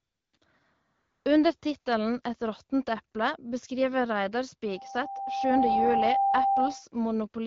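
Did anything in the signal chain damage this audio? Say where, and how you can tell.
Yes. In call processing, the phone stopped sending speech frames at 0.00–0.33, 0.37–0.41, 0.93–1.25 and 1.59–1.61 s. AMR comfort noise then swaps the real background for smooth synthetic noise that switches in and out.

An acoustic loop between a loudspeaker and the microphone feeding it caused a loudspeaker feedback squeal from 4.65 to 6.84 s. A 788 Hz tone swells over about a second to roughly 5 dB above the speech.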